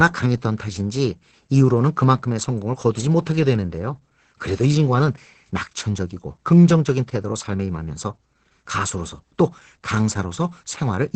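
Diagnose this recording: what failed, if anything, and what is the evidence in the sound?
The failure is at the codec stage: Opus voice compression running hard. The speech has nothing above about 8.8 kHz for the whole clip, which points to wideband SILK mode, and the damage is heavy: the speech comes out muffled, a bit hoarse and faintly robotic. That fits a bitrate around 10 kbps, where the linear-prediction coder has too few bits for the excitation and renders it coarsely, roughening the texture of every syllable.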